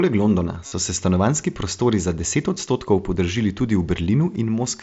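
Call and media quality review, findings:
Buzzy held tone, slight warble on return, 0.66–0.72 s before "se stanovanjski prostori za"; near-hidden blips 2.55 s after "stanovanjski prostori za deset" and 4.35 s. Concealed Bluetooth headset packet loss: receiver repeating recent waveform over dropped mSBC packets.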